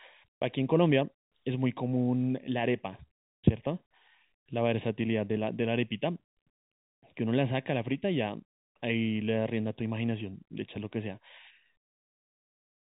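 Speech, heard through a telephone-band channel that cuts off at 4 kHz, carries channel delay (comb filtering) from start to finish. One channel lags the other by roughly 0.4 ms, so summing to mono cancels content in fixed notches from around 1.5 kHz upward, giving the voice a hollow, phasey colour.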